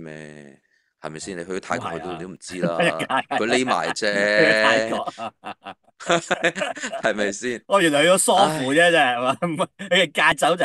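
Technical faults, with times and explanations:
2.36 s, 6.34 s and 10.32 s: audio missing between chunks. At each point a short piece of the sound, roughly 20 ms, simply vanishes. The audio on either side is butted together with no silence between, so it jumps forward abruptly. The skips recur about every 4 s. That steady spacing points to the likely cause: processing in 4-second blocks, with a sliver lost each time one block closes and the next opens.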